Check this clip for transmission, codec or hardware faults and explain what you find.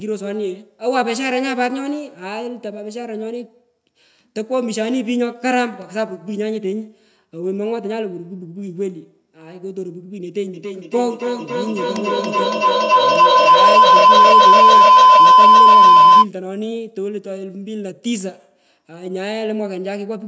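There's one clear fault: a feedback howl running from 10.54 to 16.31 s. Two devices in the same room are on the call, so the sound loops from one's loudspeaker into the other's microphone and back, picking up level each round instead of dying away. It narrows onto a tone around 1 kHz, pulses roughly every third of a second with the loop delay, and peaks about 13 dB above the speech before it cuts off. The call's microphone processing, which leaves nothing above 8 kHz, is just how the call path is set up.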